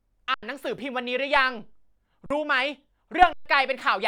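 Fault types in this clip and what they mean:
Underrun with held sample: speech freezes at a flat held level three times, for 85, 43 and 128 ms, then resumes past lost audio because the output buffer ran empty.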